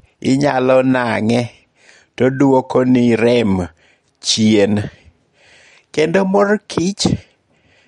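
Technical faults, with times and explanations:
Throughout, MP3 compression: the speech has plainly audible codec damage, with nothing above 11.2 kHz and a watery, swirling texture on sibilants and consonant attacks. The likely cause is an MP3 encode starved of bits, which fits a rate near 48 kbps. The encoder imposed a fixed treble ceiling and discarded quiet spectral lines. As those lines drop in and out between frames, the remaining detail flickers and transients smear.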